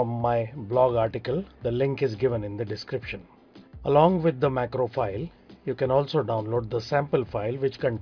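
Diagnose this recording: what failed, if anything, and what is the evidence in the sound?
Nothing failed; no fault is audible anywhere.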